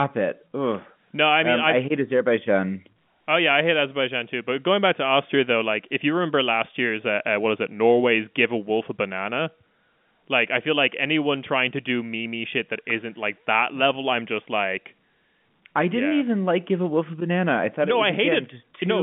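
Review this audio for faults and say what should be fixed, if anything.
Nothing to fix: the speech sits in the telephone band of about 150 Hz to 3.5 kHz that G.711 A-law coding at 64 kbps produces, and no fault can be heard.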